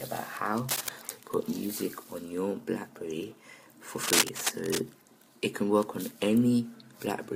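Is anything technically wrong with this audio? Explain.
Yes. From 0.69 to 0.89 s and again from 3.96 to 4.79 s, dense, ragged bursts of scratching noise sit about as loud as the sound itself. This is cable scratch noise, likely a worn cable or connector being moved so its contact resistance fluctuates rapidly.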